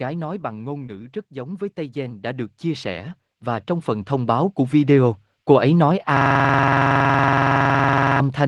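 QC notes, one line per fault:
0.05–1.02 s, automatic gain falling: the speech starts loud and then sinks by about 5 dB over roughly a second, with the background dropping right along with it. The automatic gain control judged the input too hot and eased its gain down gradually.
1.33–5.22 s, automatic gain rising: speech and background swell together by about 15 dB over nearly four seconds. The automatic gain control treated the input as too quiet and slowly raised its gain, lifting everything in the signal together rather than the speech alone.
6.17–8.20 s, system hang loop: a coarse, buzzing stutter at about 21.5 Hz replaces the speech. The same 46.44 ms slice repeats exactly, over forty times. This fits a 2048-sample ring buffer that the audio hardware kept replaying while the system or driver had frozen.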